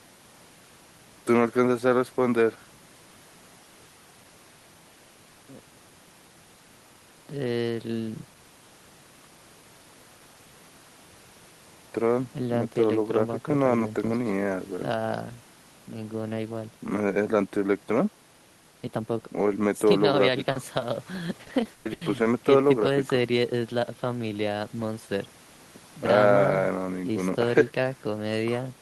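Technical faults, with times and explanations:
20.51–20.57 s and 20.79–20.83 s, short concealed packet loss: two brief holes, about 40 ms and then 20 ms of audio, did not arrive in time to be decoded. The receiver covered each hole by extending the preceding sound, continuing its pitch where it was voiced or substituting shaped noise where it was not, then crossfading back into the real signal. Each event is heard as a small smear or wobble.
21.41–22.27 s, repeated packet loss (robotic sound): across this 0.86 s stretch the stream broke up six times, with the longest gap 140 ms and about 320 ms in total synthesised, roughly 37 % of the span. Concealment had barely handed back to real audio before the next gap began, so the extrapolated fragments run together into a choppy, robotic texture with parts of the sound missing.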